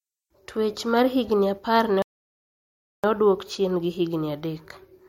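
At 2.02 s, right after "mar higni apar ne", the speech drops into silence and stays there until 3.04 s, when it picks up with "odwok chien gi". This is a rebuffering stall: playback used up the audio it had already downloaded and paused until more data arrived. Because the sound resumes at exactly the point where it stopped, nothing is skipped or repeated. The stall only inserts about 1.01 s of dead air.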